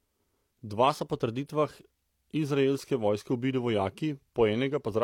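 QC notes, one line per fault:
0.89–2.26 s, drift correction step: the speech suddenly runs about 5.6% fast and rises roughly 94 cents, nearly a semitone, then snaps back right before "izraelske vojske ubili". Speed and pitch move together, likely a clock-sync resampler jumping its rate to rebalance its buffer.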